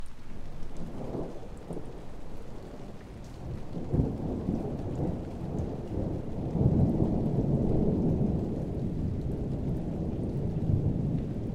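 No technical faults can be heard anywhere in these everyday sounds. Nothing in the audio needs marking at any point.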